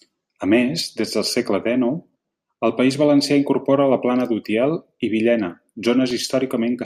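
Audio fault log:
6.11 s, block of digital silence: for about 0.67 ms, a span that fits a 32-sample block, the speech drops to silence and then resumes with no fade on either side. The gap is far too short to hear as a hole, so it comes across as a tick or dip. On the waveform the trace snaps to a near-flat line and jumps back. On the spectrogram a thin vertical broadband streak spans the frequency range at that instant.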